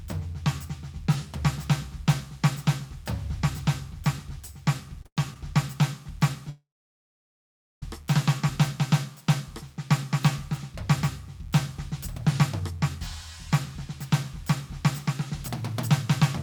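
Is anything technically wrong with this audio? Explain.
Yes, there are three kinds of network trouble in this music.

From 5.00 to 5.36 s there's a burst of repeated stalls (stutter). Packets were arriving late, so the jitter buffer kept running dry, four times here, and the receiver stretched the last bit of sound to cover each gap. About 149 ms got filled that way, the longest gap 110 ms, so roughly 41% of that stretch is patched. Nothing's lost, but the music hiccups and drags.

Then from 6.49 to 7.83 s you get what sounds like a call audio freeze. The sound hangs as a fading continuation and then drops to silence for about 1.17 s, 1.33 s of filler in all. That's likely packets held up in transit emptying the buffer. When playback picks up, it carries on from where it stopped, so the gap is inserted rather than anything cut.

Later the buffer sheds excess delay with a jitter buffer speed-up. 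From 12.49 to 12.81 s playback runs at 110%, dropping a few tens of milliseconds, and from 13.80 to 16.21 s it runs at 105%, trimming something like 150 ms. Tiny pitch-period-length slices get removed back to back to shrink the delay, so the pitch holds but the tempo visibly rushes.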